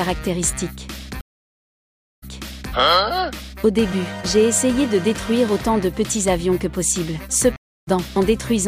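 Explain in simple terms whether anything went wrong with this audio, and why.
Stream reconnects at 1.21 to 2.73 s and at 7.56 to 7.89 s. Each time the connection dropped, the player went quiet, reconnected and restarted its decoder partway through the stream. At the first, the sound stops for about one second, then comes back 0.51 s earlier, so a short stretch repeats. At the second, the gap lasts about 0.3 s and the sound picks up roughly a fifth of a second later, skipping a little.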